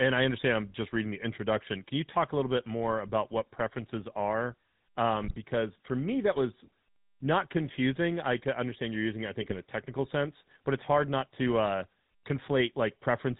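From start to end the speech carries the buzzy, gravelly roughness of the GSM full-rate codec, with nothing above 4 kHz; unlike plain band-limiting, the pulse-driven excitation adds a rasp, pointing to 13 kbps coding. At 5.23 to 5.36 s and again at 9.42 to 9.57 s, GSM bit errors corrupt the decoder's filter, pitch and gain values, producing brief squawks, pops and gargling rather than clean dropouts.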